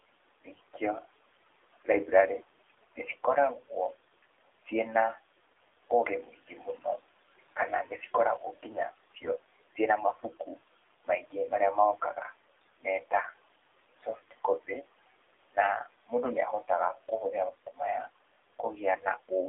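Throughout the speech, AMR narrowband mobile codec coding limits the sound to a 300 Hz to 3.6 kHz line band. The buzzy, synthetic edge fits a rate near 7.4 kbps. Unlike plain band-limiting, the voice itself sounds modelled, and the background swirls rather than just dulling.

Noise suppressor artifacts also run the whole length. The room noise, sitting about 17 dB under the speech, is pushed down by about 19 dB between phrases and returns beneath them. That pumping with level tells it apart from the codec's steadier warble.

From 0.42 to 1.06 s, speech cut by the noise suppressor swallows soft consonants and word endings for around a fifth of a second in total, dropping them by up to about 19 dB. These losses are brief and tied to quiet speech sounds, unlike a dropout, which would remove everything at once.

At 2.68 to 2.84 s, AMR bit errors make the voice hoarse and gargly for a short stretch, which points to several corrupted frames on a weak link. 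The pitch and level roughly hold, and that separates it from a suppressor cut, which turns speech down rather than roughening it.

From 5.89 to 11.35 s the suppressor cuts speech again, about a second in total, by up to about 18 dB. Inside that span, 9.16 to 9.32 s brings another scratchy burst of AMR bit errors at a slightly higher error rate.

Further suppressor cuts follow at 12.0 to 13.34 s (up to about 21 dB, roughly 0.3 s affected), 13.95 to 14.83 s (about 17 dB, roughly 0.2 s) and 15.51 to 17.81 s (about 19 dB, roughly 0.4 s). Each one leaves quiet phrase parts faint rather than distorted.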